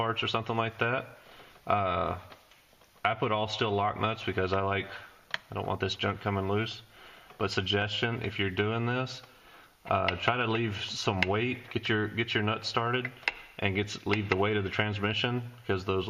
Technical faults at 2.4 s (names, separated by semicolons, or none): none